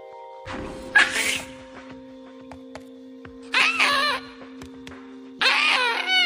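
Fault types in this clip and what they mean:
Damaged data in a compressed stream: corrupted bytes in the encoded stream cause the decoder to misread frames and lose sync until it finds the next valid frame header. Here it produces two short glitches, at 0.43 to 0.48 s and at 5.37 to 5.41 s, each roughly 40 ms long.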